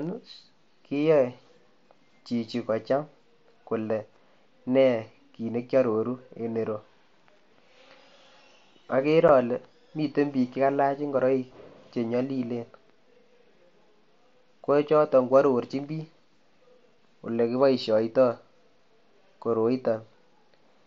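At 9.28 s, just before "ale miten biik che", the speech briefly drops out, a 7.5 ms hole with abrupt edges. This is unconcealed Bluetooth headset packet loss: a single voice packet on the mSBC link went missing and silence or an idle pattern was left in its place.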